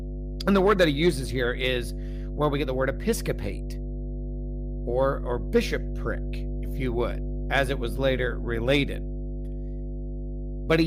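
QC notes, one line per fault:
Throughout, mains hum: a steady low tone at 50 Hz, with some low harmonics, sits under the speech at a strong level, only about 5 dB below it. Power-line energy is leaking into the signal, as a ground loop or nearby transformer would cause.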